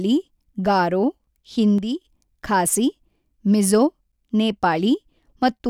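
It's speech, with an abrupt drop of about 6 dB from 1.78 to 2.02 s, likely one channel dropping out briefly before the mono sum.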